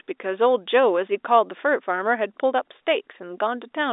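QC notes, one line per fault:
No faults found; the speech carries the expected G.711 A-law telephone band, about 300 Hz to 3.7 kHz with nothing above 3.8 kHz.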